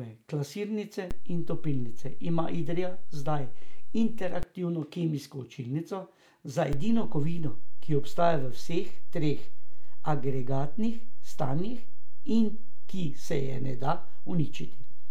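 At 1.11 s a DC step shifts the speech's zero line by about -23 dBFS, holding until 4.43 s, when it snaps back. A second step of about -21 dBFS arrives at 6.73 s and stays to the end. Each jump sounds as a low thump under the speech, which carries on unchanged. On a waveform the trace visibly rides above or below centre. A spectrogram shows a brief low-frequency smear at each edge.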